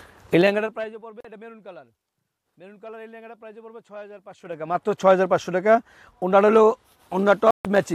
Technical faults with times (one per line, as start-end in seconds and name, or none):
0.37-1.02 zipper noise
1.20-1.25 Bluetooth dropout
4.27-4.83 zipper noise
7.51-7.65 Bluetooth dropout